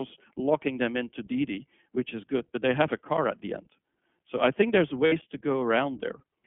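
Speech passed through the iLBC codec, and the coding damage is plainly audible. The audio is confined to a telephone band of roughly 150 Hz to 3.4 kHz, with nothing above that. Because the codec models each short block of excitation independently rather than carrying detail across from the previous block, the voice has a rough, slightly synthetic texture throughout, consistent with iLBC's 15.2 kbps mode and its 20 ms frames. There are also two instances of lost iLBC frames. The first falls between about 2.38 and 2.41 s, right after "which is" and before "but they have a". About 20 ms of sound is replaced, which fits a single missing frame. The second runs from about 5.06 to 5.13 s and fills roughly 60 ms, consistent with three consecutive lost frames. In both gaps the decoder covers the hole by repeating the last pitch cycle blended with noise, so the dropout comes across as a brief held, faintly buzzy vowel rather than silence. 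Since each frame decodes on its own, the voice snaps back to normal immediately after each gap.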